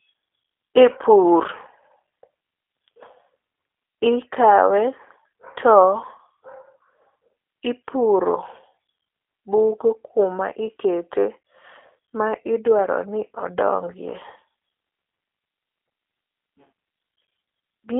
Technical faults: G.729 codec

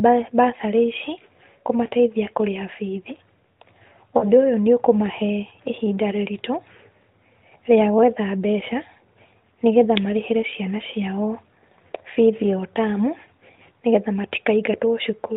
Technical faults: lost AMR speech frames

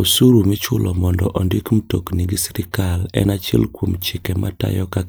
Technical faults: none

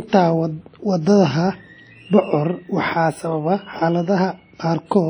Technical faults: WMA compression

